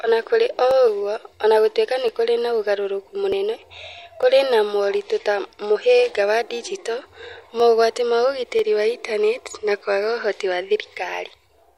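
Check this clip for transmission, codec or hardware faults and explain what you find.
Two kinds of transmission fault are audible in this speech: six isolated clicks from dropped samples, and two small skips from overlap between stream segments.

Dropped samples: sharp single clicks at 0.71, 2.08, 4.23, 6.14, 7.60 and 8.59 s. Each is likely caused by a fraction of a millisecond of samples going missing, so the waveform steps abruptly to a later value. Nothing audible is lost, only a thin tick. The uneven spacing sets these apart from the segment overlaps, which fall on a regular grid.

Overlap between stream segments: brief skips at 1.33 s and 3.32 s, where about 13 ms and 8 ms of sound vanish. The stream arrives in 2.0 s segments whose time stamps overlap, and the player trims the overlap even though that sound was not actually duplicated, so the waveform jumps. Unlike the dropped-sample clicks, these remove a sliver of the speech and land exactly 2 s apart, at segment boundaries.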